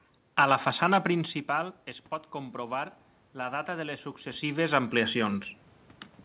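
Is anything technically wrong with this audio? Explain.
Yes. From 1.12 to 5.42 s, just after "la façana", there is automatic gain rising: the input fell by about 13 dB when the talker moved back, and the gain control slowly added about 6 dB, so voice and room noise swell together. The band stops at 4 kHz, which fits a G.711 call path.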